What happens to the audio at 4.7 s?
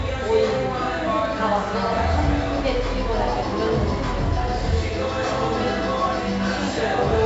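At 4.7 s, as throughout the clip, heavy 4-bit ADPCM compression adds gritty hiss that rises and falls with each loud sound, unlike steady background noise. Nothing sounds above 7.7 kHz.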